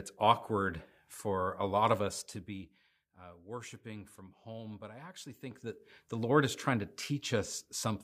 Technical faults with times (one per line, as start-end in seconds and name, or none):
2.03-2.96 zipper noise
5.44-5.94 zipper noise